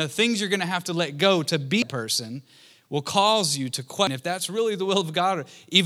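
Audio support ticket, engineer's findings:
Audio missing between chunks. Abrupt skips at 1.82 s (after "to let go to", before "person will cause you") and 4.07 s (after "will cause you to"). Around 300 ms lost each time, sides butted together with no silence. Likely a recorder or processor handling 2.5 s blocks and dropping audio at each block changeover. Waveform: hard splice, sudden amplitude and phase jump, no gap. Spectrogram: vertical seam where harmonics and formants break off and restart mid-contour.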